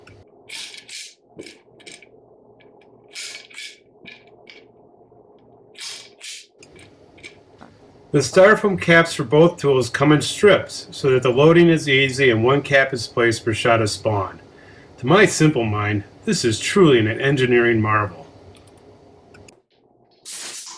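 No technical faults are audible.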